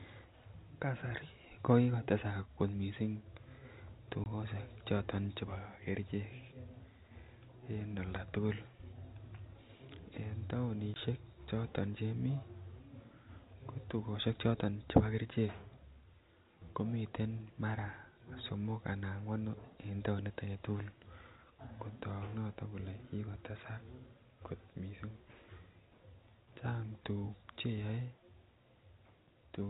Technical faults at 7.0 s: none

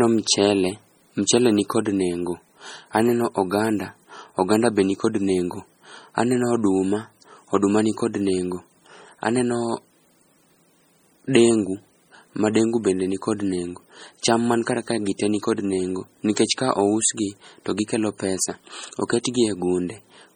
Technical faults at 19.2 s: MP3 compression; pre-echo

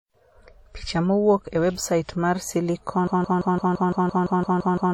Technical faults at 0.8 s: WMA compression

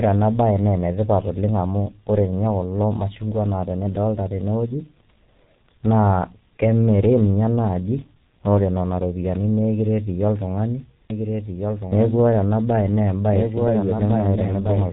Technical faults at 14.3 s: G.723.1 codec; doubled audio track

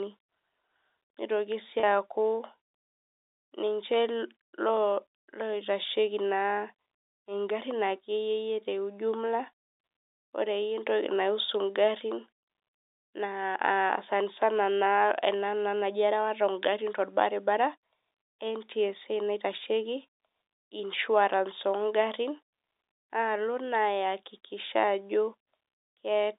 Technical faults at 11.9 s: none

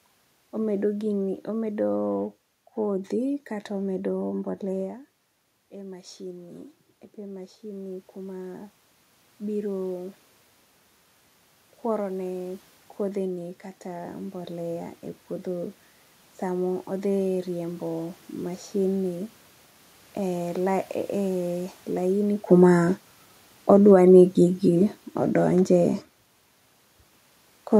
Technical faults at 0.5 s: none

